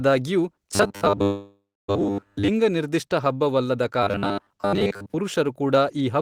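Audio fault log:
0.75–2.50 s and 4.03–5.14 s: robotic sound from repeated short buffers. The speech turns into a rigid metallic buzz at 100 Hz, so the likely cause is audio arriving too seldom and the last 10 ms being looped to fill in, with roughly two-thirds or more of each stretch made of repeats. It ends before "ನಿರ್ದಿಷ್ಟ ಹಬ್ಬವಲ್ಲದ" the first time, and sits between "ನಿರ್ದಿಷ್ಟ ಹಬ್ಬವಲ್ಲದ" and "ಪುರುಷರು ಕೂಡ" the second.
1.23–1.90 s: call audio freeze. Inside the first robotic stretch the sound hangs, stretching the last bit into a fading tail and then about 280 ms of silence, 650 ms filled in all. Likely packets stalled and the jitter buffer ran dry; nothing is lost, but everything after lands 650 ms later.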